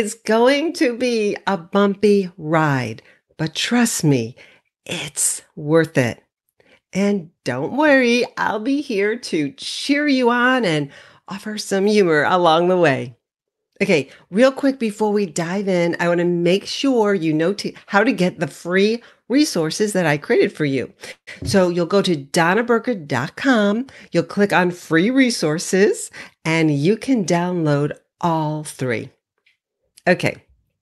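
Right after "I created for you", from 21.11 to 21.29 s, there's a call audio freeze. The most likely cause is packets stalling in transit so the jitter buffer ran dry. The receiver stretches the last bit of sound into a short buzzy tail that fades, with about 70 ms of actual silence. When the packets arrive the speech picks up exactly where it stopped, so nothing's lost, but roughly 0.16 s of extra delay gets wedged in.

Shortly after, from 23.19 to 25.90 s, leading into "and you can download", you get a jitter buffer speed-up. The buffer was holding more audio than it wanted, so the receiver kept snipping out tiny pitch-period-sized slices to catch up, trimming around 150 ms in total. The speech runs at about 105% speed with the pitch unchanged, so it just sounds a touch rushed through that stretch, all carried over an Opus call path whose top end stops at around 12 kHz.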